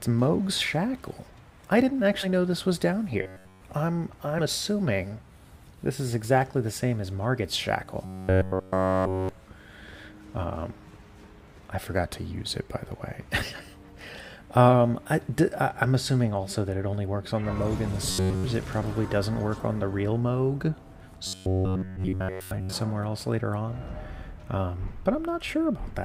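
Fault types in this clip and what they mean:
Compressed frames skipped: Whole 10 ms frames of the encoded audio never reach the output, so the sound jumps forward instead of pausing. This sets it apart from a dropout, which leaves a gap. The five jumps come at 2.22 s (about 50 ms lost), 4.38 s (about 70 ms), 16.93 s (about 20 ms), 21.96 s (about 100 ms, inside a buzzing stretch) and 24.76 s (about 10 ms). Each is a brief discontinuity at the join.
Robotic sound from repeated short buffers: A steady 93.8 Hz buzz replaces the normal sound from 3.22 to 3.61 s, 8.05 to 9.29 s, 18.11 to 18.44 s and 21.27 to 22.73 s. This fits one roughly 10.7 ms chunk being looped throughout each stretch, likely because fresh audio was arriving too slowly. Unlike a skipped frame, which is a momentary jump, this is a sustained, rigid, metallic tone that only loosely tracks the original.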